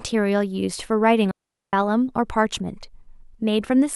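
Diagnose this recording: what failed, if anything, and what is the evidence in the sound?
The speech cuts out cleanly from 1.31 to 1.73 s, a hole of near silence lasting about 0.42 s with no noise burst on either edge. That's a digital wireless dropout at the transmission stage: the receiver lost too much data and muted with a very quick fade.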